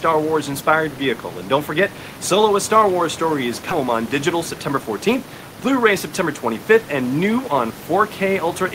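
A speech recording with room noise sitting about 17 dB below the voice, in which the sound lurches forward at 3.71 s, just after "story is," joining the two sides with no gap. This skip ahead comes from roughly a third of a second of audio being dropped while later audio was already waiting. From 3.81 to 5.23 s the speech then runs hurried at unchanged pitch, about 6% fast. That is a jitter buffer speed-up, where the receiver repeatedly trimmed short pitch-period pieces, about a tenth of a second in all, to shrink an excess of buffered delay.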